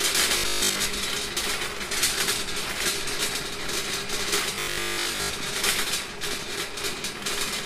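Robotic sound from repeated short buffers appears from 0.38 to 0.90 s and again from 4.56 to 5.34 s. Both times the audio collapses into a rigid, metallic buzz fixed at 50 Hz, which fits a segment of about 20 ms being replayed over and over. The likely cause is new audio arriving too slowly, so the last short buffer keeps repeating, standing in for most of the real material during each stretch.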